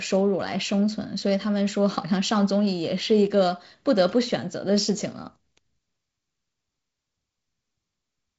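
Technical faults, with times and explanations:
Nothing stood out on listening to this speech, which comes through its wideband telephone coding as that path is meant to sound.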